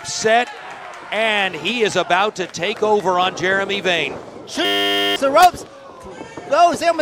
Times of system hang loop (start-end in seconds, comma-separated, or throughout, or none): 4.65-5.16